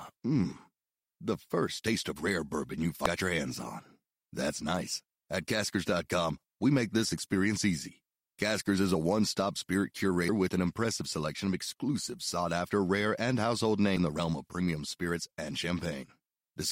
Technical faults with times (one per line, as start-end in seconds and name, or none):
3.05 damaged data in a compressed stream
10.29 damaged data in a compressed stream
13.97 damaged data in a compressed stream